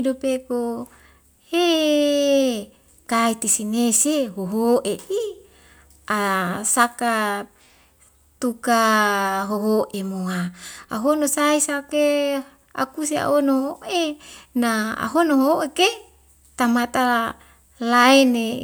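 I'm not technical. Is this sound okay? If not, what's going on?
Yes, this sound is okay, and nothing is going on with it that needs fixing.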